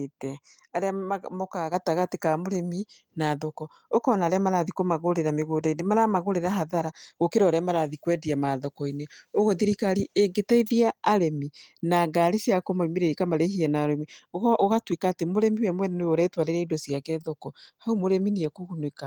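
At 1.74 s the whole sound jumps abruptly louder by about 6 dB, the speech and the background rising together in a single step. This is a microphone volume stepped up: the call software judged the input too quiet and raised the device's input gain at once.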